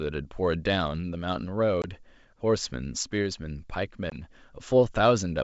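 A speech clip over a wideband G.722 link, whose 64 kbit/s sound stays clear up to about 7 kHz, shows packet loss on an ADPCM call at 1.82–2.00 s and 4.10–4.18 s. Each time a 20 ms hole, about a couple of packets, drops to flat silence with sheer edges on the waveform and a full-height vertical gap on the spectrogram. Afterwards the decoder's predictor and step size no longer match the sender's, so speech returns slightly distorted before settling.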